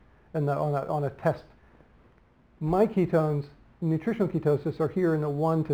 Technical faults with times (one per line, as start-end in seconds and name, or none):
0.00-5.74 crude rate conversion